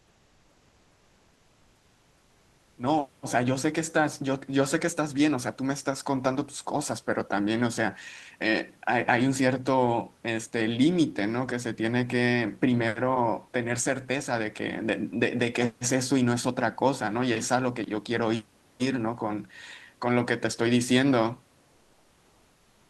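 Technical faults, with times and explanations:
0.00–2.75 s, comfort noise in place of the background: For the first 2.75 s the background is a steady, featureless hiss with none of the room's natural detail. It sits about 39 dB below the loud parts and about 2 dB quieter than the real background that follows. The likely cause is discontinuous transmission in the Opus call path. The sender stops sending during silence, and the receiver fills the gap with synthetic noise until the sound begins.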